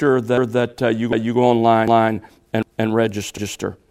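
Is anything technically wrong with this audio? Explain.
Yes, there are overlapping chunks. At 0.38, 1.13, 1.88, 2.63 and 3.38 s, a 250 ms slice of sound plays a second time before things move on. It looks like the audio was handled in 0.5 s blocks, with each block starting a quarter-second before the previous one finished, so the tail end gets replayed at every join. You hear it as a regular stutter, a little hiccup roughly every 0.75 s.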